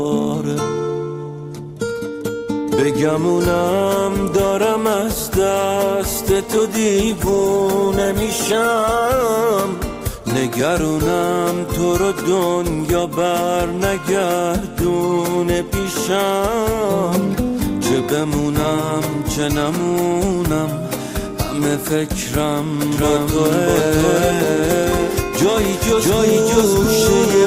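From 7.08 to 9.08 s the quality drops suddenly, with rising codec artefacts, then snaps back with no gap at either edge. This is an adaptive stream at a lower bitrate. A slowed connection fits a switch from 64 down to 16 kbit/s Opus. Unlike a dropout, nothing goes silent.

At 22.92 s a doubled audio track begins abruptly and runs to the end. A full-band copy at roughly the same level trails by about 0.7 s. The copy has no decay or room colour, which separates it from reverb or an acoustic echo. The likely cause is a second, slower capture path or an edit holding two offset copies.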